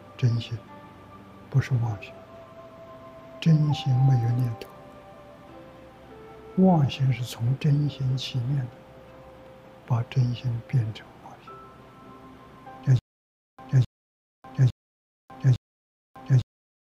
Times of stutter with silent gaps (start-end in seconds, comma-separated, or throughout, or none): 12.99-16.80